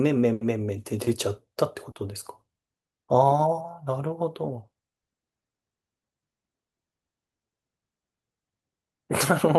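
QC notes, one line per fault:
1.91–1.97 s, short concealed packet loss: a brief smear in the speech. About 40 ms of audio reached the decoder too late, so the receiver stretched the preceding sound over the gap and then blended back into the real signal.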